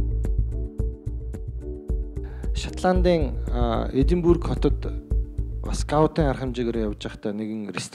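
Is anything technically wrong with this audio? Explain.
Yes, there's one clear problem. From 2.47 to 3.46 s the audio briefly runs about 5.6% fast, so everything is pitched up by roughly 94 cents, close to a semitone, for just under a second before it snaps back to normal. That's most likely a drift correction step: software reconciling two mismatched clocks adjusted the playback rate in one jump to rebalance its buffer, so speed and pitch moved together and you hear a sudden detune.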